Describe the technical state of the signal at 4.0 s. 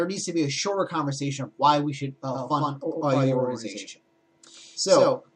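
At 4.0 s a doubled audio track is present, running from 2.34 s to the end: a full-band second copy trails about a tenth of a second behind, a few dB quieter, likely from a second, slower capture path. Unlike an echo, it has no decay or room colour and cuts in abruptly.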